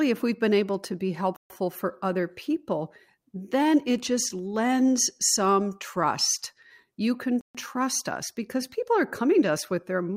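A Bluetooth stall, likely from interference draining the headphone buffer, cuts the speech to silence for about 0.14 s at 1.36 s and again at 7.41 s.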